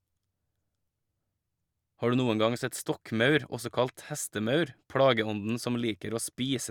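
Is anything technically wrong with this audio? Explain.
No, the speech signal reaches the listener with its level, timing and frequency content intact, and nothing audible points to a fault in the recording or playback chain.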